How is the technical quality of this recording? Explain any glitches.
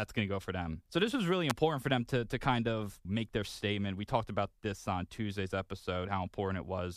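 One glitch stands out in the speech. At 1.50 s there is an electrical switching spike, a sharp snap peaking somewhere around -10 dBFS and lying on top of the sound rather than replacing it. A nearby switch, motor or static discharge likely arced briefly, with the audio line picking up that burst as a click.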